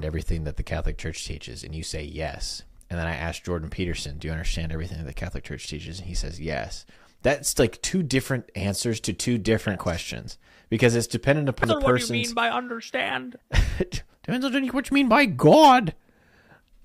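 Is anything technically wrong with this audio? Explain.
Yes. Three short skips are audible, at 2.28 s, 10.28 s and 11.64 s. Each is a jump forward in the sound. There is no gap. This is likely a dropped buffer (overrun). Samples were overwritten before being read. The first two lose around 40 ms, the third nearer 70 ms.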